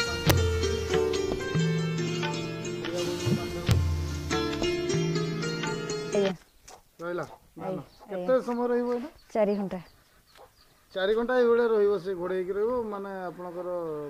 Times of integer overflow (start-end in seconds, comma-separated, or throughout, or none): 0.30, 3.71